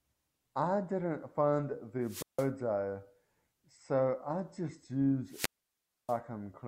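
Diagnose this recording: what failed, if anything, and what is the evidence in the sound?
Wireless microphone squelch dropout in the analogue radio link, before conversion: hiss swells, then output mutes, at 2.03–2.49 s (about 160 ms silent) and 5.27–6.18 s (about 630 ms). The rising static before each hole, unlike a network dropout, marks fading RF triggering squelch.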